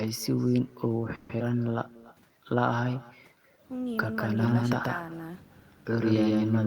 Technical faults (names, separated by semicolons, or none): echo with no canceller; call audio freeze; skip ahead; jitter buffer slow-down; doubled audio track